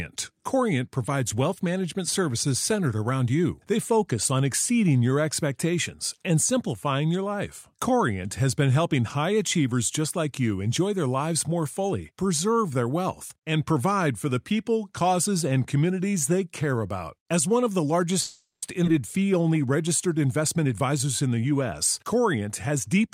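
From 18.21 to 18.64 s the sound stops and the last fragment is stretched into a fading buzz or hiss that ends in about 150 ms of silence. This call audio freeze was likely caused by delayed packets draining the jitter buffer. Playback then resumes where it stopped, so nothing is lost.

At 18.84 to 18.87 s a skip ahead follows. Roughly a fifth of a second of audio is dropped, and the two sides are joined across a 10 ms fill. This removes about half of the delay built up during the freeze.

Two jitter buffer speed-ups come next, from 20.41 to 21.62 s at 109% and from 22.03 to 22.87 s at 107%. Short pitch-period pieces are cut repeatedly, about 100 ms and 70 ms in total, so the speech sounds hurried while keeping its pitch.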